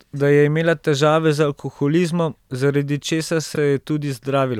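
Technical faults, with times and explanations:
3.54–3.57 s, repeated frames: just after "zaradi česar", a 26 ms block of compressed audio, which points to a single frame, was delivered twice, so the decoder plays it again. This gives a brief stutter, adding 26 ms.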